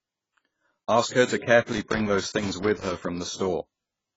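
Throughout the speech the sound is dull and smeared, with a warbling, fizzy texture and nothing above 7.6 kHz. The likely cause is heavy AAC compression: AAC-LC at a rate pointing to roughly 16 kbps, which lowers the cut-off and quantises away spectral detail.

From 1.72 s to 3.05 s, just after "her to", an irregular burst of crackle and scratching breaks up the audio. This is loose connector crackle: a worn or dirty contact rapidly making and breaking, chopping the signal on and off.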